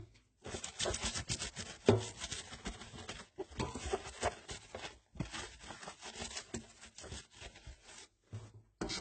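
From start to finish, likely transcoding between lossy codecs, HE-AAC into AAC-LC: nothing remains above 8.5 kHz, and both codecs' artefacts sound together.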